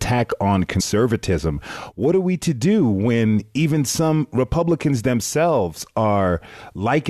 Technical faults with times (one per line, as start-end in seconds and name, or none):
0.79 damaged data in a compressed stream